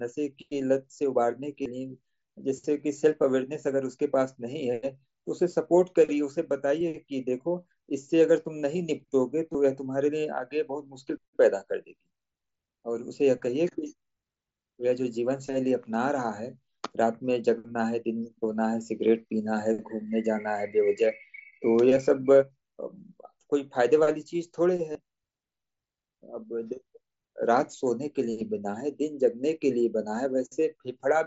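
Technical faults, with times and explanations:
1.62–1.66 s, 9.53 s and 24.93–24.95 s, concealed Bluetooth headset packet loss: three brief buzzy holds, lasting 30 ms, 15 ms and 22.5 ms, each with a faint warble as the real signal resumes. Packets from the headset were dropped, and the phone filled each gap by repeating the best-matching slice of the preceding waveform, which fits runs of lost 7.5 ms frames. The audio around these gaps stays within the mSBC link's 8 kHz speech band.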